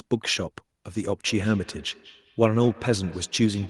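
Speech, and from 1.26 s to the end there's feedback echo between two devices: the sound keeps coming back at roughly a fifth of a second, peaking about 23 dB under the voice. Two devices in the same room on one call, each mic catching the other's speaker, and neither echo canceller touching it.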